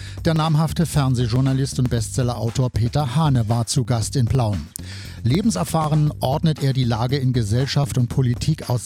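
Periodic USB or driver dropouts: roughly 1 ms of audio is skipped every 0.5 s from 0.36 to 8.34 s, giving about fifteen regular ticks.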